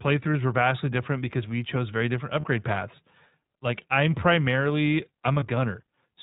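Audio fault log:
throughout iLBC codec. The speech is narrowband, with nothing above 4 kHz. It sounds clear but slightly rough and synthetic. Each short frame's excitation is coded alone, and the plainly audible damage fits iLBC's 15.2 kbps mode with 20 ms frames.
2.40–2.46 s and 5.40–5.44 s lost iLBC frames. Gaps of about 40 ms and 20 ms become a brief held, faintly buzzy vowel. The decoder repeats the last pitch cycle mixed with noise. That fits two frames and then one. The speech recovers at once.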